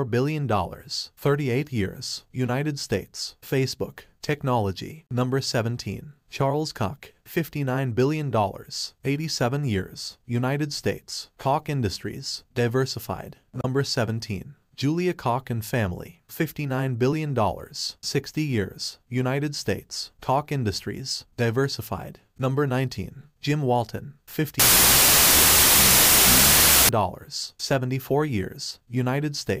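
Wrong sample width, 24.60 to 26.89 s: 32-bit samples read as 16-bit split each value in two, giving loud noise over buried sound at half speed, an octave lower.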